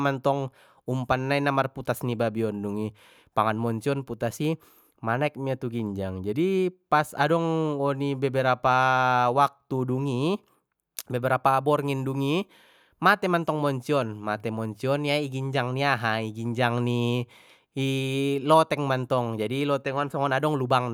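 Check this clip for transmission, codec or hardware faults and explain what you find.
No transmission, codec or hardware faults can be heard here.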